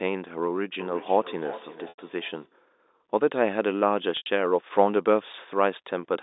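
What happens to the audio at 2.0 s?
Right around 2.0 s you're inside a stretch of feedback echo between two devices, running from about 0.79 s to 2.58 s. Two devices in the same room are on the call, and one plays back what the other's mic sent; that mic hears it again, and neither echo canceller touches sound it didn't play itself. So the speech comes back roughly every 0.4 s, thinner and a bit ringy, peaking around 17 dB under the direct sound.

Just before that point, from 1.89 s to 1.98 s, there's packet loss with pitch repetition. About 90 ms went missing, which fits something like three lost packets, and the receiver covered the gap by looping the last pitch period and fading it down. At that length you hear a brief buzzy hold sinking toward silence, then the sound cross-fades back in right around 2.0 s, with the echo still trailing over it.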